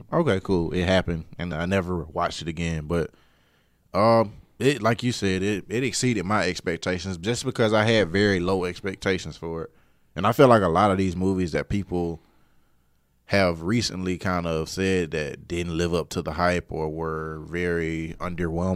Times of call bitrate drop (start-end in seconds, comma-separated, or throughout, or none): none